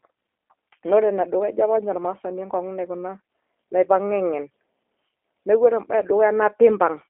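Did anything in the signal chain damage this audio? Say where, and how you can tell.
Yes. The damage is at the codec stage, throughout the clip. This is G.729 speech coding. Nothing passes above 3.7 kHz, and the band sits near 300 Hz to 3.4 kHz. The speech sounds rough and synthetic. It is rebuilt from a vocal tract filter, pitch predictor and sparse pulses, which fits an 8 kbit/s G.729A link.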